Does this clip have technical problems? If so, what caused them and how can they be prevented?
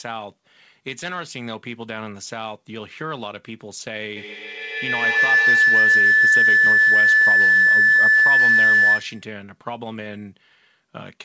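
Yes. From 4.16 to 9.39 s a piercing tone near 2 kHz swells, building with repeats roughly every 150 ms, until it peaks about 15 dB above the speech. This is feedback howl: a loudspeaker's output re-enters a nearby microphone and gains level on each pass around the loop. Keep only one device joined in the room, or mute the others and use headphones.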